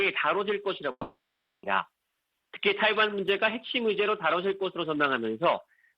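At 0.91 s the sound collapses into a fading buzz, then silence until 1.66 s, dropping roughly 0.7 s of material, most likely a long network dropout.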